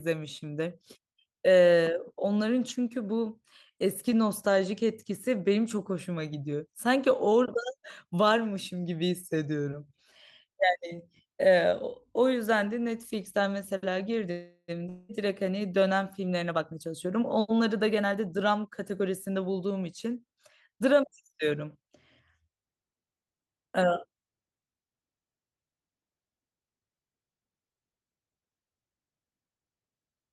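At 14.31 to 14.80 s, a call audio freeze, likely from delayed packets draining the jitter buffer. The last sound stretches into a fading buzz, briefly silent, then resumes with nothing lost.

From 14.89 to 15.12 s, a long network dropout, likely with about 0.2 s of audio never arriving. A fading buzz fills the gap, and the speech skips past the missing part.

Between 16.34 and 19.37 s, a jitter buffer speed-up trims short pitch-period pieces to cut excess delay, about 0.4 s in total. The speech runs at 112% speed, hurried but unchanged in pitch.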